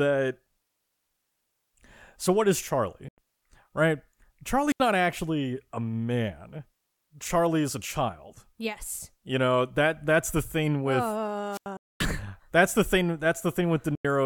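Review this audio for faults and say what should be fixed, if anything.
A wireless link between the sender and the headphones likely failed to deliver audio packets in time, so they were discarded. The result is a Bluetooth dropout: holes of silence at 3.08 to 3.18 s and 13.95 to 14.05 s, each about 93 ms long, which fits roughly four lost packets, and a longer one at 11.77 to 12.00 s lasting about 232 ms. After each hole the speech picks up further along, as though it had kept playing through the gap. Keeping the headphones close to the source and clear of competing 2.4 GHz traffic would prevent this.

The analogue FM microphone's radio signal faded far enough for the receiver's squelch to close and mute the output, a wireless microphone squelch dropout. At 4.67 to 4.80 s and 11.51 to 11.66 s there is a brief swell of hiss, then near silence of about 81 ms and about 89 ms respectively, before the speech returns. 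Better antenna placement, a clear line of sight and a fresh transmitter battery would prevent it.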